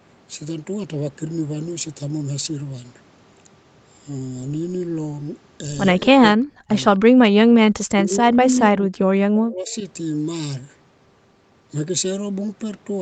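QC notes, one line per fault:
6.08 to 9.76 s, speech suppressed in double talk: The speech dips sharply five times, at 6.08 to 6.73 s, 7.21 to 7.61 s, 7.86 to 8.33 s, 8.53 to 8.95 s and 9.34 to 9.76 s. The first four drop by about 40 dB and nearly vanish. The last one drops by about 25 dB. The likely cause is both sides talking at once. The echo canceller could not tell this talker from the returning loudspeaker sound, so it turned everything down in bursts.
9.68 to 9.75 s, echo leak: A faint, brief copy of the sound arrives 256 ms after the original. It sits about 35 dB below the speech, so it is only a short ghostly scrap. It likely comes from a loudspeaker on the far end. That end's echo canceller missed some of what its microphone picked up and sent it back. It lands right at the tail of the last suppression dip.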